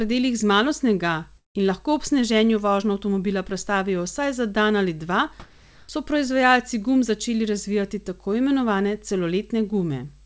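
At 1.38 s the speech breaks off for roughly 0.18 s, to 1.56 s. The receiver first stretches the last sound into a fading buzz or hiss, then leaves about 160 ms of near silence before the audio resumes further on. Around 170 ms of material never arrives and is simply skipped. This is most likely a long network dropout: packets stopped arriving, so the decoder concealed the gap with synthetic continuation until it gave up and went quiet.

From 5.40 s to 5.89 s, a pause of about 0.49 s, the background is replaced by comfort noise. Here the real room sound, which sits about 30 dB below the loudest passages, gives way to a smooth, featureless hiss, roughly 1 dB different in level, until speech returns. The likely cause is discontinuous transmission: the sender stopped transmitting during the pause and the receiver generated shaped noise in its place. Throughout, the G.722 call path limits the audio to 8 kHz.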